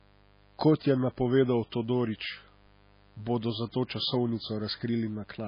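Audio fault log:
Throughout, mains buzz: a steady, raspy buzz sits well below the speech, built on 50 Hz with sharp switching spikes twice per cycle, so its harmonics climb into the kilohertz range. That edge separates it from a smooth, pure hum at the fundamental.
Throughout, MP3 compression: the speech has nothing above 5 kHz and sounds watery and swirly, with smeared consonant onsets. This likely comes from heavy MP3 encoding at a starved bitrate near 19 kbps. The swirling, as faint components flicker between frames, separates it from a simple low-pass filter.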